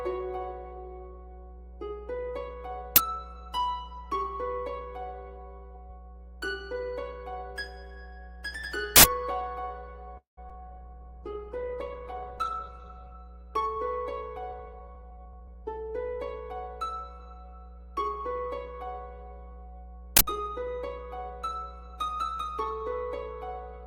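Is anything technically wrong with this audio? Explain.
Yes. Mains hum runs through the whole clip, a steady 60 Hz tone sitting only about 10 dB below the sound. A ground loop or a nearby transformer is letting the power line leak into the signal path, so the hum never lets up, and it carries a few low harmonics above the fundamental.

Uninitialised buffers produce three loud bursts of digital noise, at 2.96 s, from 8.96 to 9.04 s, and from 20.17 to 20.21 s. Each time, a block of memory went to the output before any audio had been written into it, so whatever data was left over played as samples. The bursts last roughly 20, 80 and 40 ms, which fits buffers of those lengths. They are harsh and loud, and may carry a high tonal edge.

A call audio freeze runs from 10.17 to 10.39 s. The last sound is held as a fading buzz or hiss, then falls to about 130 ms of silence before playback resumes. 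The likely cause is packets delayed in transit until the jitter buffer ran dry. Nothing is lost when the audio picks up again, but about 200 ms of gap has been inserted, which pushes everything after it later.

Short concealed packet loss follows from 10.49 to 10.62 s. About 20 ms of audio never reached the decoder in time, and the receiver patched the hole by extending the preceding sound before blending back into the real signal. The patch is brief, so what you hear is a small smear or wobble rather than a dropout, and a very short sound in that spot may be gone.

A call bitrate drop lasts from 10.66 to 13.24 s. The encoder was told to fall from 48 to 11 kbps after the call's bandwidth estimate collapsed, and it held the lowest rate for about 2.5 s. At that rate Opus codes coarsely and cuts the high frequencies, so the sound turns rough, watery and muffled until the bitrate recovers.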